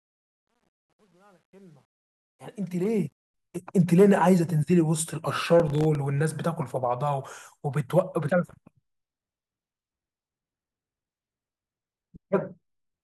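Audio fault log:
0.0–3.34 s, truncation distortion on a fade: the fade-in's gain stage keeps only 10 bits with no dither, so the quiet opening, worst before 2.26 s, turns gritty.
5.60–5.95 s, processor overload crackle: the processor misses many audio deadlines in a row, each gap of roughly 1.5 ms falling to silence, so the sound tears into a short crackling burst.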